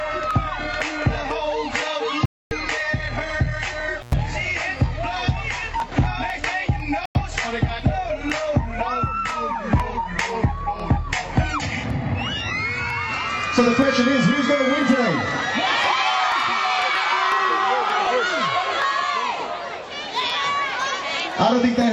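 At 2.26 s the receiver stopped getting decodable frames, whether from a lost signal or from frames failing their checksum, and muted until clean data returned. The result is a digital broadcast dropout: the sound drops abruptly to silence for 256 ms and resumes at 2.52 s with that stretch simply gone, a gap that fits roughly eight frames of 32 ms each. A shorter one follows at 7.06 s, a 96 ms hole ending at 7.16 s, consistent with about three frames lost, again with clean silence and no trace of what was transmitted meanwhile.

Between them, at 4.01 s, a loose plug or cable briefly opened the signal path, an intermittent contact. The sound cuts out for about 98 ms, until 4.13 s, with crackle as the contact breaks and remakes, and faint hiss is left in the gap while the line is open.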